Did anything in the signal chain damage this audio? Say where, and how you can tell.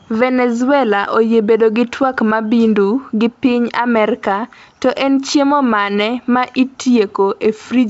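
No, nothing along the way has harmed this speech, and the G.722 wideband telephone coding at 64 kbit/s sounds just as that path should, carrying the audio up to about 7 kHz.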